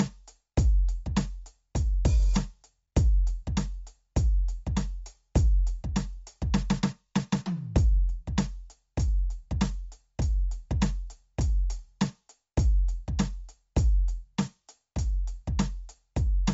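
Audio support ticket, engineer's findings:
Music runs dull and band-limited the whole way through, nothing above about 7.7 kHz, with a grainy, breathy haze up top. Likely Bluetooth LC3 compression on the link: upper band zeroed and noise-filled, fits roughly 32 kbps, 10 ms frames.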